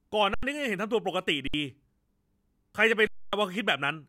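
At 0.34 s the speech stalls for 85 ms: an underrun with held sample. The buffer ran empty. The converter held its last value. The sound goes flat, and live audio was lost meanwhile. Repeats at 1.48 s (61 ms) and 3.07 s (256 ms).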